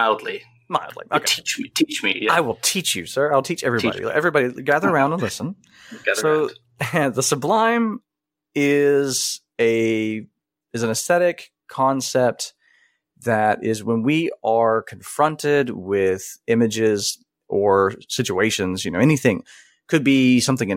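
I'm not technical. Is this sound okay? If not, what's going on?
Yes, nothing stood out as a problem when listening to this recording.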